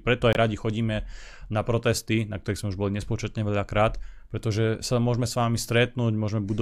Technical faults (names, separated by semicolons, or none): Bluetooth dropout